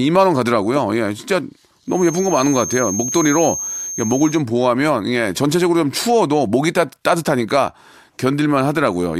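From 1.84 to 4.44 s, a thin feedback whistle near 6.4 kHz sits under the speech. It is likely a speaker-to-microphone loop held just at the point of feedback.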